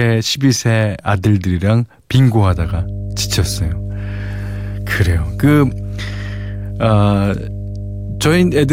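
From 2.49 s to the end, the power line leaks into the signal path, likely through a ground loop or a nearby transformer, adding mains hum: a steady 50 Hz drone with low harmonics that sits loud, only a little beneath the speech.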